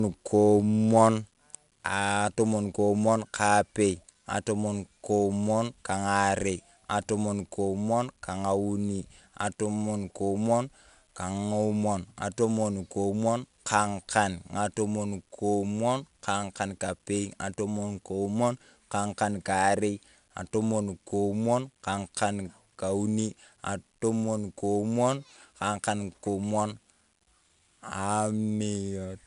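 4-bit ADPCM compression runs through this speech clip from start to finish. Each sample is stored as a coarse 4-bit step away from a predicted value, with the step size adapting as the signal moves. The result is a plainly audible gritty hiss that rises and falls with the speech level, plus roughness on sharp onsets where the step cannot grow quickly enough. Nothing is present above 10.6 kHz, which fits a sample rate near 22 kHz and a data rate of roughly 88 kbps.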